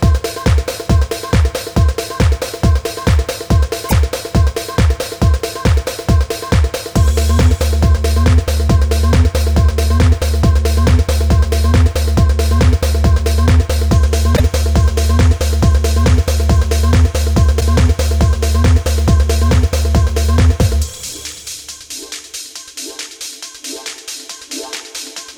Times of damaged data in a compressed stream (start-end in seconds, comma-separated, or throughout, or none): 3.85-3.92, 14.33-14.40, 17.57-17.62